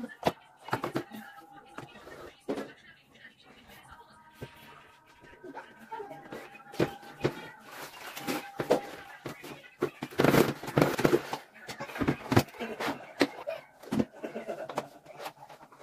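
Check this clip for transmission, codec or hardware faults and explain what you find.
Two compressed-frame skips occur, at 10.93 s and 13.42 s. At each, whole frames of the encoded stream never reach the output, either missing from the file or rejected by the decoder as damaged, so playback jumps ahead, by roughly 0.3 s (about ten frames) and then roughly 0.2 s. The 26.1 ms frame length points to the step size. Unlike a dropout there's no silent gap, and unlike a click the join is a short smeared blip from overlapping frames.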